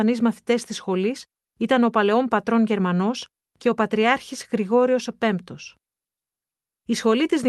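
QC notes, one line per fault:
No faults found; the speech has come through a WebRTC call path working as expected, with an upper band edge near 12 kHz that points to an Opus-coded call.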